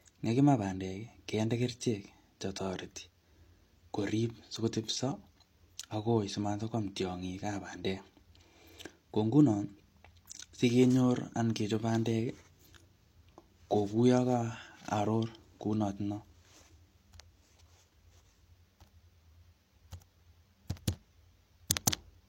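At 21.86 s, pre-echo: the transform codec spread quantisation noise across its block, so about 10 ms of hiss arrives before a sharp speech onset, softening it. A spectrogram shows a faint broadband smear just ahead of the attack's vertical edge.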